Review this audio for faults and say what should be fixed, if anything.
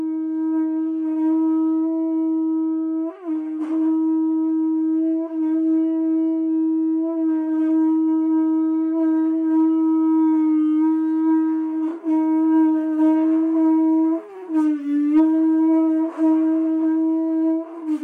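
Hard clipping occurs from 15.17 to 15.20 s. For about 36 ms the signal runs roughly 2 dB past what the stage can carry. The peaks are sliced flat at that ceiling. The flattened tops add harmonics high up the spectrum. The overload is small and brief, so it comes across as a short crackle on the peak rather than sustained fuzz. To prevent it, lower the gain before that stage to leave a few decibels of headroom above the loudest peak.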